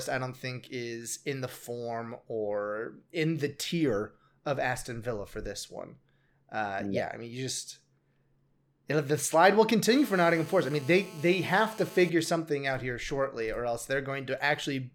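At 9.91 s a GSM phone buzz cuts in and holds steady until 12.10 s. A 2G handset close by is on a call, firing radio bursts at 216.7 per second, and something in the audio chain is rectifying those pulses into the signal. You get a hard, raspy buzz at that rate, stacked with harmonics, sitting about 20 dB under the speech and ignoring it completely.

Straight after, from 12.19 s to 13.39 s, it turns into GSM signalling bursts. The phone is still in the call, but its user has gone quiet, so it only sends short clusters of bursts rather than a continuous stream. The rectified result is even ticks with a longer 217 Hz buzz twice a second, noticeably softer than the steady buzz, somewhere around 30 dB below the speech.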